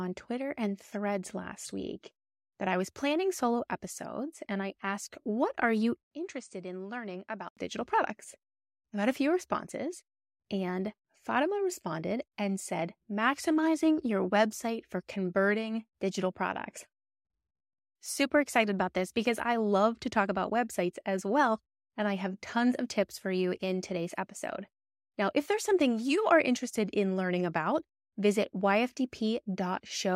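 From 6.03 to 7.57 s, after "are you", the input likely switched to a poorer device. An 80 ms silence marks the switch, then nothing above 9.1 kHz passes, the level drops by around 10 dB and a faint new noise floor appears, so the sound turns dull until "digital products I got".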